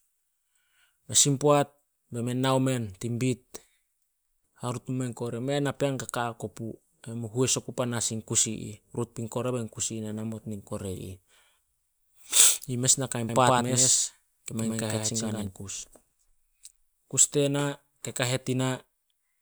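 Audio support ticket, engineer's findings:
Doubled audio track, 13.29–15.47 s, right after "mes nakai". Full-band second copy at roughly equal level, about a tenth of a second behind, no decay. Spectrogram: every feature repeated, sharp start/stop edges. Likely cause: duplicate capture path or misaligned edit.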